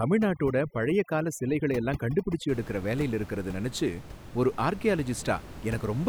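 Overdone noise removal runs from the start to 2.49 s, just before "எடுக்கற வேலையில இருக்குறத நினைச்சு". The suppressor cuts any frequency band near its noise estimate, so the room noise, about 14 dB below the speech, collapses into twinkling specks.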